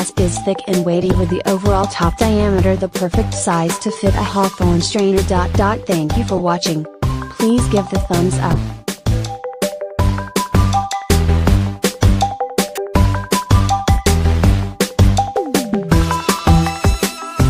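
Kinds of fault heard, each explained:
Corrupt frame decoded: seven brief chirps and noise bursts, the loudest near full scale, from damaged compressed frames the decoder played anyway, misplacing energy in frequency.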